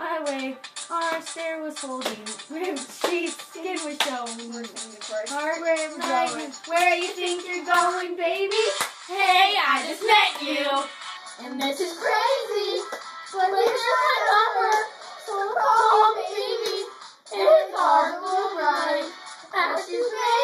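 From 11.17 s to the end, there's channel delay (comb filtering). One channel lags the other by a tiny fraction of a millisecond, so the mono sum cancels at evenly spaced frequencies, the first around 3 kHz. The sound turns hollow and phasey.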